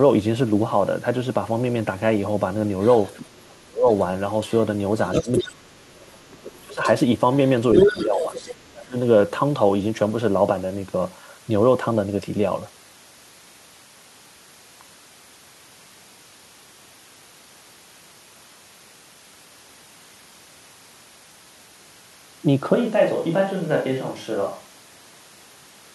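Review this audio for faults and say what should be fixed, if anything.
A second voice bleeds into the speech from 2.82 to 4.52 s, faint at first, then from 5.06 to 5.43 s and 6.32 to 8.71 s at roughly the same level as the speech. This is other side's voice leaking through, likely loudspeaker playback the echo canceller left in the microphone signal. Using headphones or a better-tuned echo canceller would prevent it.

The speech dips sharply at 3.39 to 3.87 s, 5.22 to 6.83 s and 7.87 to 8.95 s, falling some 20 to 30 dB while the other voice is present. This is speech suppressed in double talk, likely the echo canceller turning down everything when both sides spoke together. A canceller with proper double-talk detection, or headphones, would avoid it.

From 22.75 s to the end the speech turns hollow and roomy, drops about 5 dB, and picks up more room noise. This sudden change is a switch to a distant microphone, likely a fallback to a farther pickup after the close microphone's signal was lost. 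Monitoring the close microphone's feed during recording would catch this.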